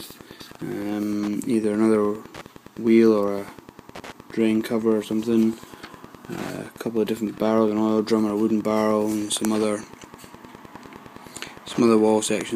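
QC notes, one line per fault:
throughout, Wi-Fi interference: a steady ticking repeats every 102.4 ms, just under ten times a second, roughly 25 dB below the audio. The audio circuitry picks up and rectifies a nearby Wi-Fi radio's beacon transmissions, turning each beacon into a click.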